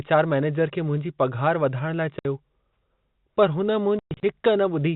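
Hard-edged silent holes cut the speech at 2.19 to 2.25 s and repeatedly from 3.99 to 4.23 s, where the longest gap is 120 ms. This is packet loss filled with silence, and the gap lengths fit 30 ms packets, all over narrowband G.711 telephone coding.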